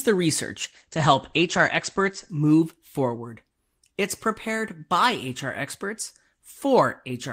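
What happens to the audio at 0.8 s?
At 0.8 s the speech is inside a call bitrate drop that runs from 0.62 to 2.35 s. The connection's bandwidth estimate fell, so the encoder spent far fewer bits for about 1.6 s. The coarser coding sounds rough and watery, which fits a fall from 32 kbps to roughly 12 kbps. The top end is also cut. Bandwidth shrinks from 20 kHz to 8 kHz, so the voice turns muffled until the rate recovers.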